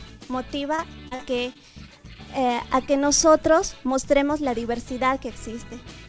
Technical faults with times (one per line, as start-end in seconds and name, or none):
0.76-1.57 repeated packet loss (robotic sound)